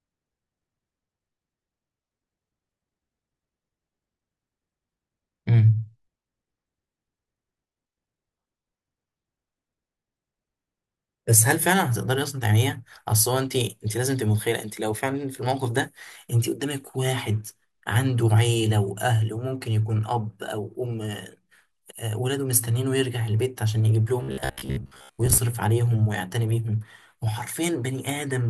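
Speech clip, and near the end, from about 24.23 to 25.39 s, you get that robotic sound from repeated short buffers. For just over a second the voice turns into a stiff, metallic buzz sitting at 66.8 Hz, still loosely tracking the speech. The likely cause is audio arriving late, with the player looping roughly 15 ms chunks to fill the gaps, which fits that buzz rate, while about half the real audio gets dropped.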